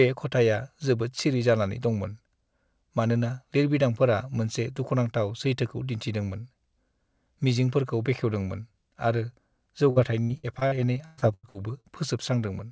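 From 9.90 to 11.86 s, repeated packet loss strikes the speech: about a dozen holes, the longest about 0.12 s, each patched by stretching the last sound, concealing nearly a third of that span. The speech turns choppy and robotic, with pieces missing, above a band that stops at 8 kHz.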